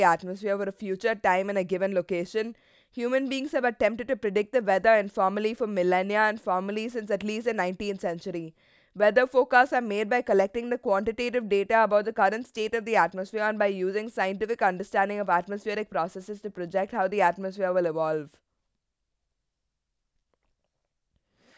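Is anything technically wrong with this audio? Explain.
No, nothing technically wrong can be heard here.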